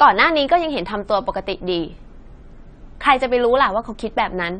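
From start to finish the speech carries plainly audible codec damage, likely from AAC compression. Nothing is present above 9 kHz, so the top of the spectrum is simply missing and the sound is dull. The encoder has spent its few bits on the strongest frequency lines and dropped or approximated the rest, giving a smeared, warbling texture on sustained sounds and a fizzy edge on sibilants, which fits a bitrate around 32 kbps.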